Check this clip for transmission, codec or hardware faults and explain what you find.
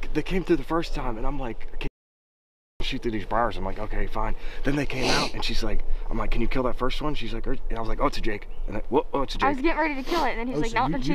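There is one fault, an audio dropout to silence from 1.88 to 2.80 s. For about 0.93 s the sound cuts out to silence, with no room tone. The input was likely lost while the recorder kept writing silence. Whatever occurred then is gone.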